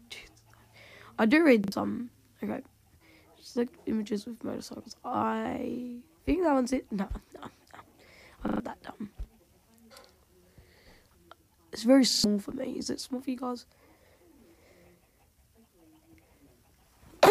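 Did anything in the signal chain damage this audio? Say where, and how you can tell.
Yes: repeated buffer at 1.64, 8.48 and 12.12 s, a driver or buffer fault. Late audio made a chunk fitting a 40 ms buffer replay with hard joins, heard as brief stutters.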